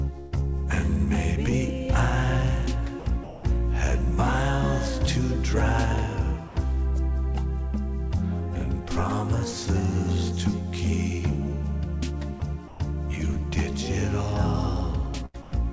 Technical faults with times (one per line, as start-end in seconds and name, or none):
0.20-0.34 burst of packet loss
3.00-3.44 sound dropped by the voice detector
6.48-6.56 sound dropped by the voice detector
12.40 sound dropped by the voice detector
12.68-12.80 sound dropped by the voice detector
15.26-15.36 burst of packet loss
15.42-15.52 sound dropped by the voice detector